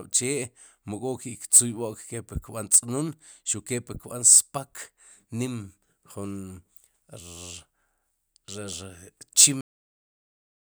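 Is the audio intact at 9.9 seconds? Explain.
No. At 9.9 seconds the clip is inside a cut-off end: the speech stops abruptly at 9.61 s and stays in digital silence to the end at 10.67 s. The final buffers were never written, so the sound ends mid-syllable with no decay. A natural fade or a gap between words would leave room tone or a tail, and this has neither.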